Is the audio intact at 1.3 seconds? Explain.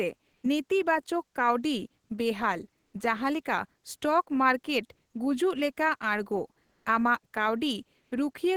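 Yes, the audio is intact at 1.3 seconds, with no dropout, click, distortion or other fault at that moment.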